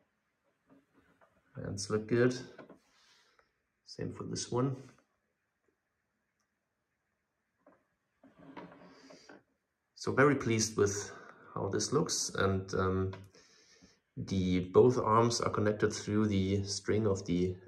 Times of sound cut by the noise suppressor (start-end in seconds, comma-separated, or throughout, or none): 0.95-1.55, 2.78-3.41